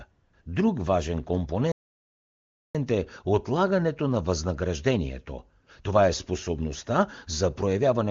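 Between 0.11 and 0.33 s, and again from 0.41 to 0.45 s, the background turns into a smooth, even hiss that switches in and out. This is AMR comfort noise: the phone treated these moments as silence, sent no speech frames, and the receiver substituted synthetic noise built from a rough level and spectrum estimate.

At 1.72 s the sound halts mid-flow and stays silent for about one second, resuming at 2.75 s just before "е отлагането на възнаграждението". This playback stall was likely caused by the player running out of buffered data or its thread being blocked.

Right after "е отлагането на възнаграждението", from 5.62 to 5.66 s, a short 40 ms patch of the same steady comfort noise replaces the real background. The sender again stopped transmitting speech frames for that instant. The speech itself keeps the clear wideband character of HD Voice, with at most faint codec coloration.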